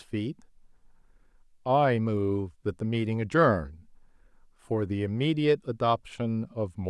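No technical faults can be heard anywhere in this speech recording. Nothing in the signal stands out as damaged or disturbed at any point.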